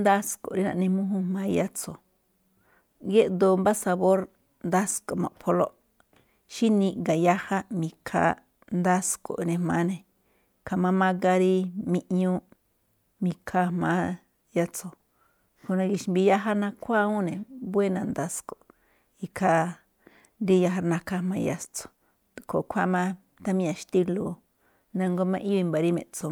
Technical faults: none

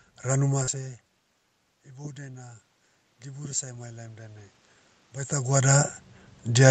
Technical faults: short concealed packet loss; automatic gain rising

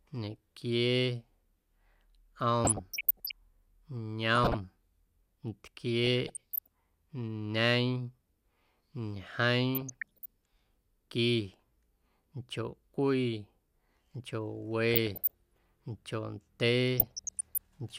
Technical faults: DAB burbling

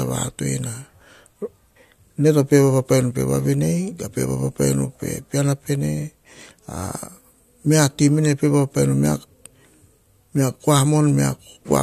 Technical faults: none

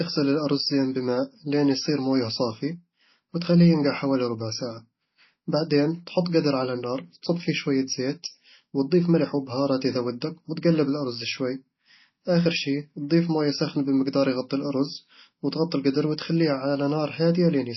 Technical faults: MP3 compression

